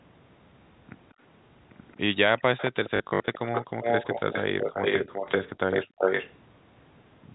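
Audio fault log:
1.10 to 1.14 and 1.92 to 1.97, echo leak: faint scraps of the sound return 223 ms later, about 40 dB and about 35 dB down, likely from a far-end loudspeaker whose echo canceller let a little through. Their fixed delay distinguishes them from reverberation.
2.39 to 5.49 and 5.71 to 6.34, echo leak: a second copy of the speech trails 383 ms behind at about the same level. This is likely residual loudspeaker echo the canceller failed to suppress. Its long, constant offset separates it from room reflections or doubling.
2.96 to 3.28, packet loss with last packet repeated: 180 ms goes missing, scattered over 320 ms with runs up to 60 ms. This fits 20 ms packets, so the held fragments buzz near 50 Hz, a robotic stutter rather than silent gaps.
5.87 to 5.98, background gated by the echo canceller: the room sound dips by up to about 33 dB for roughly 100 ms while the loudspeaker plays, then returns. 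Only the background drops, which distinguishes it from a connection dropout.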